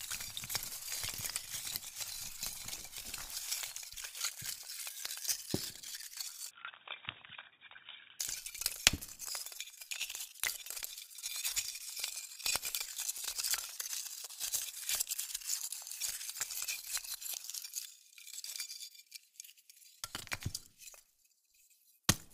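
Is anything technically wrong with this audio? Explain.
Yes. From 6.51 to 8.19 s the everyday sound abruptly turns dull and boxy, with nothing above 3.8 kHz, and drops roughly 10 dB in level. A new background noise sits about 30 dB below it, and there is no gap at either transition. The likely cause is the input switched to a poorer device, such as a second microphone or a headset's call profile, whose narrower band, different tone and own noise floor replace the original path before it switches back.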